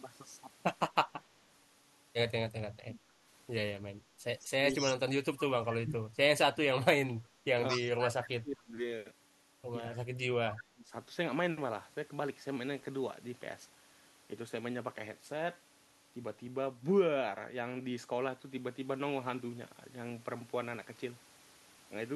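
Speech suppressed in double talk first appears at 2.70–3.01 s. The talker's level drops by around 25 dB, likely because an echo canceller mistook overlapping talk for echo. It recurs at 5.69–6.17 s, 7.72–8.76 s, 9.92–10.07 s and 10.40–10.92 s, with drops of about 15 to 30 dB. On a waveform these are sudden envelope collapses; a spectrogram shows the energy thinning out above the low band.

Echo leak is heard at 4.39–4.45 s, 4.72–4.94 s and 7.68–7.83 s. It is a copy of the speech 222 ms late, around 25 dB and then 10 dB below the talker. It is likely residue the far-end canceller failed to remove. On a spectrogram it shows as a displaced, smeared repeat of earlier harmonic patterns.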